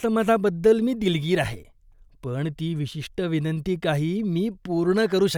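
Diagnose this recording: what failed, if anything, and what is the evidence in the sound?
Nothing failed in this recording.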